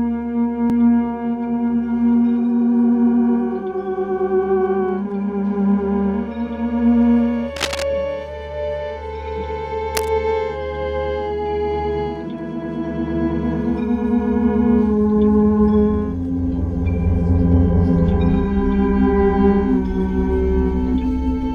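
At 7.56 to 7.85 s, and again at 9.94 to 10.09 s, a burst of cable scratch noise rustles over the sound, the first at about 5 dB and the second at about 10 dB below the signal. The likely cause is a worn cable, connector or control being moved, its contact resistance jumping about. Unlike a single click or a clean dropout, each burst is a dense, uneven scratching that lasts a moment.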